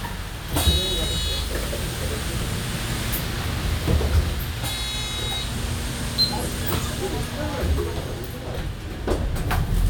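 No technical faults can be heard anywhere in this recording of sounds.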